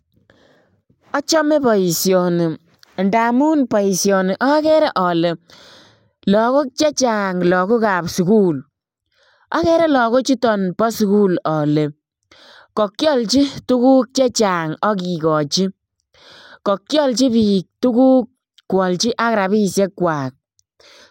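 Speech recording with no technical fault to report. Nothing goes wrong anywhere in it, so there are no times or causes to give.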